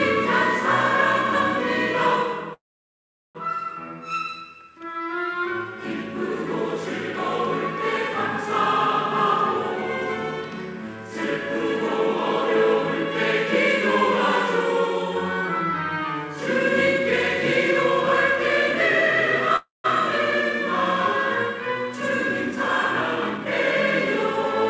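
At 2.54 s the sound stalls in a call audio freeze lasting until 3.37 s. A brief continuation of the last sound dies away into about 0.76 s of silence, then the audio resumes exactly where it left off, so about 0.81 s has been added. A second, shorter freeze runs from 19.56 to 19.86 s, with about 0.16 s of silence inside a 0.28 s gap. Packets held up in transit, which let the jitter buffer run dry, are the likely cause. Unlike a packet-loss dropout, nothing is skipped. The sound is delayed, not cut.

From 21.86 to 23.46 s a jitter buffer speed-up follows. After building up extra delay, the receiver trims it by repeatedly removing pitch-period-sized slices, taking out about a fifth of a second in total. The sound runs at 112% speed and feels hurried, yet its pitch stays put. That fixed pitch separates it from a resampling or clock-rate error, which would raise the pitch along with the tempo.

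Throughout, nothing is heard above 8 kHz, which fits a wideband call codec such as G.722.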